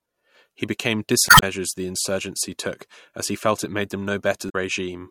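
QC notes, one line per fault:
1.26–1.43 s and 4.46–4.55 s: damaged data in a compressed stream. Two short disturbances break into the speech, the first about 0.17 s long and the second about 0.08 s. Corrupted bytes in the encoded stream leave the decoder unable to read those frames correctly, so it misreads or drops them and loses frame sync until it finds the next valid header.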